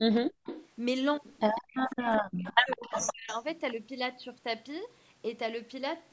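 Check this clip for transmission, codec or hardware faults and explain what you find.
Three echo-canceller faults are audible: speech suppressed in double talk, echo leak, and background gated by the echo canceller.

Speech suppressed in double talk occurs from 0.00 to 0.29 s and again from 1.96 to 3.30 s. The talker's level falls by roughly 40 dB, over about 0.3 s in the first span and about 0.7 s in total across the second, which breaks up in pieces. The likely cause is an echo canceller that could not separate the near talker from loudspeaker echo while both sides spoke, and so pulled everything down. Unlike simple gating, the speech itself is cut.

Echo leak is heard from 0.45 to 0.68 s and from 1.55 to 3.33 s as a delayed copy of the voice, trailing by 156 ms. It sits about 15 dB below the speech in the first span and about 10 dB below in the longer second one. A loudspeaker on the far end likely let part of the call back into its microphone, which the canceller failed to remove. 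A fixed, distinct delay marks it as echo rather than room reverberation, which smears continuously.

Background gated by the echo canceller occurs from 1.62 to 1.68 s, a roughly 70 ms hole where the room sound drops by about 38 dB and then returns. The canceller clamped the microphone hard while the loudspeaker played. It differs from double-talk suppression because the dip is brief and hits the background rather than chopping the talker's speech over a longer stretch. The call's microphone filtering, with nothing above 8 kHz, is normal.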